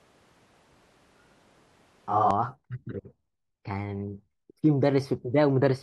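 From the very start until 2.31 s, the close microphone's signal is likely missing and the audio is coming from a mic further from the talker, a switch to a distant microphone. The speech picks up more of the room, sounding roomy and hollow with less bass. Its level stays about the same. Background noise sits low, roughly 40 dB below the speech. At 2.31 s the sound snaps back abruptly to the close, fuller pickup.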